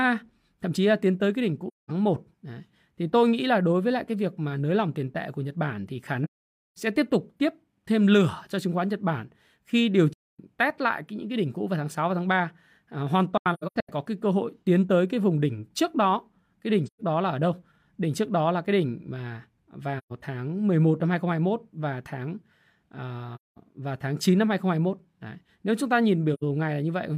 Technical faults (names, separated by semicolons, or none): AAC frame loss with muting